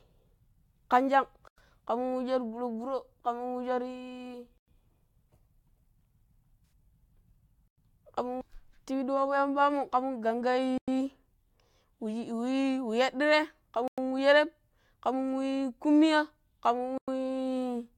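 Gap between chunks first appears at 1.48 s and recurs at 4.58, 7.68, 10.78, 13.88 and 16.98 s. Each hole lasts 100 ms, and the speech resumes exactly where it stopped, so nothing is lost. The steady spacing fits 3-second chunks with a silent pad left at every join, either from codec padding or a player that starts each new chunk late.

AAC frame loss with concealment falls between the second and third gaps, from 6.66 to 6.72 s. For about 64 ms, which fits a handful of lost frames, the speech turns smeared and noisy rather than dropping to silence. The decoder patched the missing stretch by reusing the last good spectrum with altered phase, and the loss was too brief for that fill to fade away before real audio returned.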